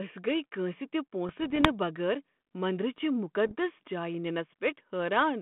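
Speech over a 32 kbit/s G.726 line, squeezed into a 150 Hz to 3.4 kHz band. The problem is bit errors on the ADPCM link. A light sprinkle of them, a fraction of a percent, causes pops and rough bursts from 1.29 to 1.71 s, right after "گٔیہِ کٲنٛسہ تہ". A denser, harsher hit of around 1% follows at 3.47 to 3.52 s. Each flipped bit knocks the decoder's step size and predictor off, so the roughness and level jumps ring on for a few milliseconds.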